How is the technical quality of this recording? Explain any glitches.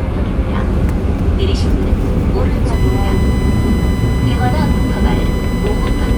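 The recording has one fault, a USB whine that enters at 2.73 s and continues to the end. Current drawn by the USB bus in regular 1 ms frames is leaking into the audio path through shared power or ground, so the sound picks up a steady fixed-pitch tone at 1 kHz with its harmonics. The strongest component sits at 2 kHz, giving a thin, high whistle roughly 20 dB below the wanted sound.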